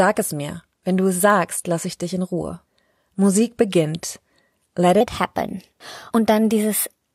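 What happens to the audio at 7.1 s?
At 7.1 s the speech is still running high and hurried, pitched up by about two semitones, as it has been from 5.0 s to the end at 7.1 s. This section at the wrong speed plays 1.14 times too fast, likely from the audio being fitted to the wrong clock.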